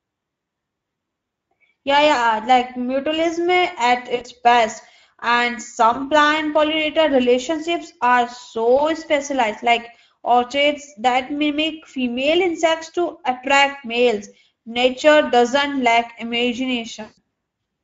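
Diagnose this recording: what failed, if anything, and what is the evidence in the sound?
The codec stage is the first problem. This is speech, and the Speex codec damage is plainly audible all the way through: hoarse, noisy voicing. That fits a middle Speex mode around 16.8 kbps, where there are too few bits for the excitation.

There are also network-stage dropouts, VoIP packet loss concealed by the speech codec, at 4.15–4.25 s right after "like mutualism at", 5.93–5.99 s just before "plant pollinator relationships are", 8.77–8.86 s between that phrase and "specialized like", and 17.01–17.18 s. In each gap the decoder stretches its last pitch and filter into a fading buzzy tone or coloured noise, and the voice stays weak briefly afterwards. The longest gap, at 17.01 s, works out to about 160 ms of missing audio.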